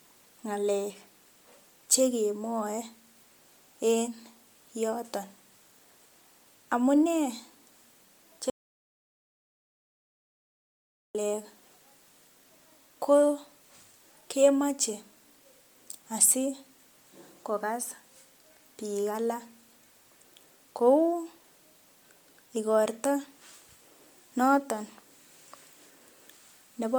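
From the start the speech carries a plainly audible grainy, breathy edge, with the upper band sounding thinned and noise-filled up to about 20.1 kHz. That's likely Bluetooth LC3 compression, and the damage fits 10 ms frames at roughly 48 kbps.

At 8.5 s there's an audio dropout to silence. The sound cuts out completely, with no room tone, until it snaps back at 11.15 s, so about 2.65 s of speech is simply gone, likely from a lost link or input.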